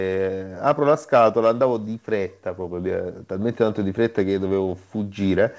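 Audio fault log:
The speech comes over a WebRTC call path with nothing above 8 kHz, consistent with the G.722 codec at 64 kbps, and no fault is heard anywhere in the signal.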